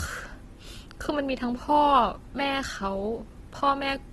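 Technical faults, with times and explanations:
Throughout, low-bitrate audio saved at a high bitrate: the speech has nothing above about 12.1 kHz and carries the coding artefacts of a heavily squeezed encode, even though the file is a roomy MP3. The likely cause is an earlier low-rate pass, something like a 16 kbit/s Opus encode, later re-encoded generously; the second encoder faithfully preserves what survived but cannot recreate the detail and top octave the first one discarded.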